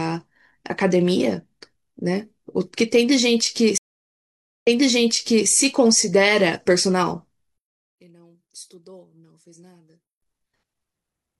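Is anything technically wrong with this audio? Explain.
Yes, there are two faults in this speech clip.

From 3.78 to 5.48 s there is a stream reconnect. The connection dropped, the player fell silent for about 0.85 s, then reconnected and started a new decoder. The server resent a burst, so the speech resumes 0.85 s earlier and repeats material already heard. That repetition sets it apart from a plain dropout, which would simply lose the audio. The restart comes in softly rather than at full level.

From 7.58 to 10.22 s the speech falls by about 26 dB and turns faint. This is most likely one channel inverted: one side of the stereo pair has reversed polarity, so when the channels are summed to mono, the centred speech and low end cancel. What remains is only the small difference between the channels. A simple level drop or fade would make the speech quieter while keeping its tone, but here the body of the sound disappears and a faint residue is left.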